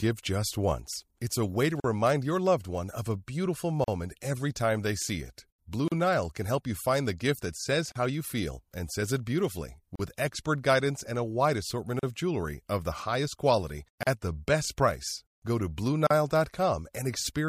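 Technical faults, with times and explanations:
1.80, 3.84, 5.88, 7.92, 9.96, 11.99, 14.03 and 16.07 s: gap at a join of encoded pieces. Every 2.0 s, the speech drops out in a 38 ms gap (41 ms at the first join), as after "wide assortment", then resumes mid-flow. Two-second segments were encoded separately and spliced untrimmed, so each encoder's start-up delay and padded final frame remain, leaving abrupt dropouts with smeared edges.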